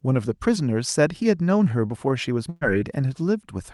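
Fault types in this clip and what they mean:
Burst of packet loss: around 2.49 to 2.63 s, roughly 120 ms of sound went missing; the receiver stretched and faded the last sound over the gap before resuming.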